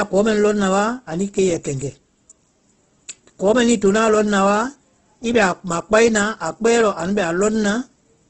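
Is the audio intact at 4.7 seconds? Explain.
No, at 4.7 seconds the speech carries Opus compression damage that runs through the whole clip, likely from a low-rate encode around 12 kbps in the music mode. Starved of bits, bands get filled with noise, so the speech sounds rough and grainy, with nothing above about 8.1 kHz.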